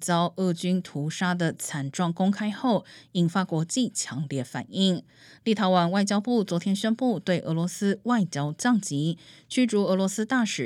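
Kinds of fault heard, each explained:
No technical faults can be heard in the speech: the signal stays continuous and steady, with no interruptions or disturbances anywhere in the recording.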